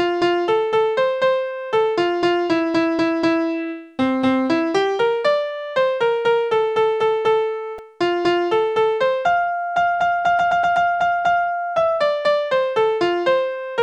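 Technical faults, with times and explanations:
7.78 s, repeated buffer: new audio arrived late, so a 1.45 ms slice played five times with hard joins. The result is a brief buzzy click rather than a stutter, which fits a 64-sample buffer, and roughly 5 ms of audio is lost.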